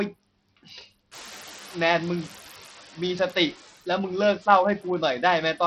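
Right from the start there are noise suppressor artifacts. The suppressor pulls down the bands it thinks are steady noise, frame by frame, but only by about 6 dB. So the noise dips in the gaps and swells back under the talker.

On top of that, the whole clip carries heavy codec damage, most likely from Bluetooth SBC compression. Nothing survives above about 16.1 kHz, and the upper treble flickers in and out as the top sub-bands get starved of bits. The quantisation is coarse enough to leave a gritty, aliased grain riding on the speech. The amount of damage fits a fairly lean bit pool, something around 64 kbps.

The room noise jumps by roughly 18 dB at about one second. That leaves it only around 18 dB under the speech, and from 1.11 to 2.69 s you hear the noise suppressor catching up. Its noise estimate is still tuned to the quieter room, so the new noise comes through with less reduction at first. 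It then settles back over about 1.6 s as the estimate adapts, with the same modest 6 dB cut as before.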